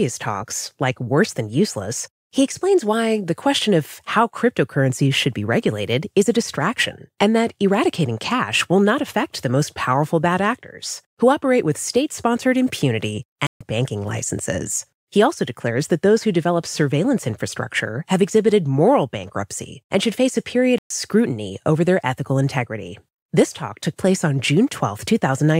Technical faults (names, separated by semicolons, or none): playback stall